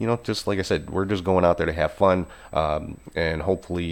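Throughout the speech runs a USB whine, a steady, fixed-pitch tone at 8 kHz, about 40 dB below the speech. It comes from USB microframe current leaking through power or ground. Unlike mains hum, it is high-pitched, and its pitch never drifts.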